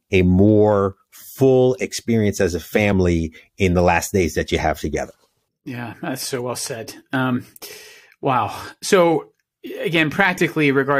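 Overlap between stream segments shows up in this speech clip at 0.93 to 0.95 s, between "a more" and "full experience as a", and again at 8.91 s. Each time the player trims audio it wrongly treats as duplicated where two segments' timestamps collide, so roughly 15 to 20 ms of real sound is discarded. The waveform jumps across the gap, which is heard as a small click or skip. The spacing points to a stream cut into 2-second segments.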